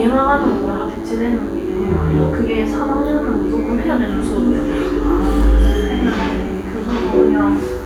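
Everyday sounds carry DECT cordless phone buzz throughout: a thin, harmonic-rich 100 Hz burst pattern about 30 dB down, harsher and edgier than smooth mains hum.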